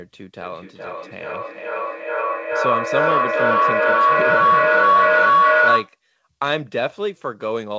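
Feedback howl runs from 0.42 s to 5.99 s. Loudspeaker output re-enters a microphone on the same call, gaining level each trip round the loop, so a tone near 1 kHz builds, repeating about every 400 ms, peaking about 8 dB above the speech.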